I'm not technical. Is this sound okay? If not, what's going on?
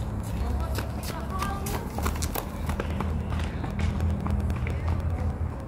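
No. Periodic USB or driver dropouts tick every 0.1 s from 0.10 to 5.60 s: a background task keeps blocking the USB connection or audio driver, replacing roughly a millisecond with silence each time.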